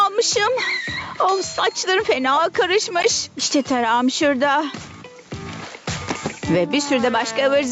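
At 3.02 to 3.05 s a corrupt frame is decoded: damaged bits in roughly two compressed frames were played anyway, throwing energy onto wrong frequencies. It sounds like a brief glitch, peaking around -5 dBFS, showing as a short vertical smear across the spectrogram.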